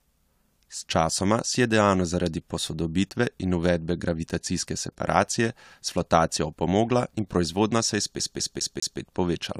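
At 8.19 s, just after "proizvodnja se je", the speech falls into a CD stuck on one turn until 9.00 s: a scratch keeps knocking the laser back a track, so the same 0.2 s fragment repeats four times, each jump marked by a brief mute.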